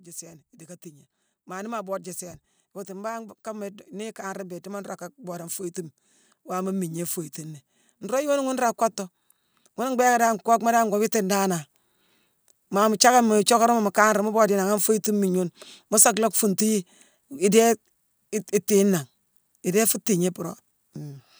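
From 2.73 to 5.66 s the automatic gain rising fault appears: the gain control judged the input too quiet and raised its gain by about 6 dB, so the speech and the room noise behind it swell together. It recurs from 9.76 to 11.64 s with a rise of about 4 dB. On a waveform the envelope widens steadily across each span, and a spectrogram shows every band, noise floor included, brightening in step.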